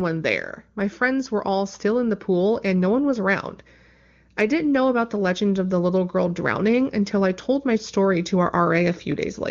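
Listening through this speech recording, nothing stood out as a technical problem.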